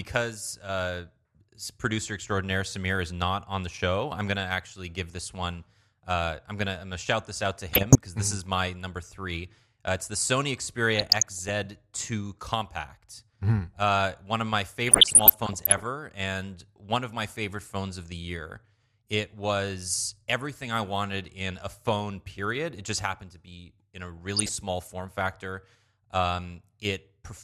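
DAB burbling occurs at 7.73–7.95 s (after "shout this out to"), 10.91–11.50 s, 14.87–15.87 s (after "one of my") and 24.18–24.55 s (before "form factor"). Uncorrected bit errors, around 1% in the first and third bursts, throw individual sub-bands off level frame by frame, producing short blips of noise and sudden level jumps over the speech.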